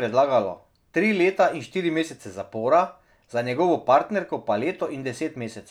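Speech recording, no technical faults heard.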